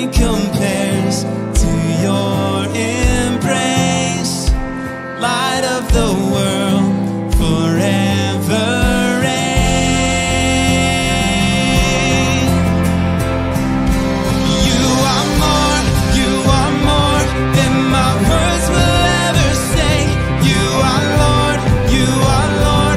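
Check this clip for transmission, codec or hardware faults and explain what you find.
I found no faults to report in this clip.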